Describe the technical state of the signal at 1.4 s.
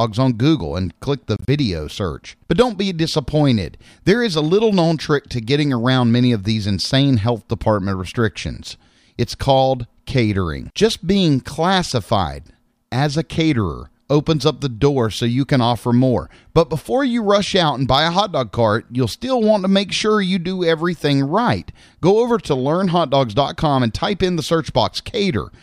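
Around 1.4 s the wireless link likely failed to deliver audio packets to the headphones in time, so they were discarded; this is a Bluetooth dropout spanning 1.36 to 1.48 s. About 73 ms of sound is lost, scattered over a 116 ms stretch as several short gaps, the longest 29 ms, which fits roughly five dropped packets. The output falls silent in each gap, and the audio resumes further along, as though it had kept playing.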